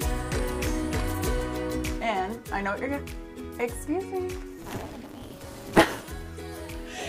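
A block size mismatch (truncated) runs from 4.58 s to 6.04 s. In that stretch the audio carries a steady buzz at 188 Hz and plays 1.88 times too fast, with its timbre staying the same. One stage is handing over longer blocks than the next stage accepts, so the tail of every block is discarded. The buzz marks each cut at the block rate, which fits reads of 256 samples, and the dropped material is what makes the sound hurry.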